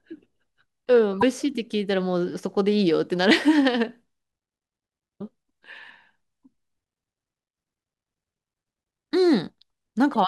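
Three brief bursts of damaged data in a compressed stream break into the speech at 1.19–1.23 s, 5.17–5.21 s and 10.12–10.16 s, each about 40 ms long. Corrupted bytes make the decoder misread frames and lose sync until it finds a clean header.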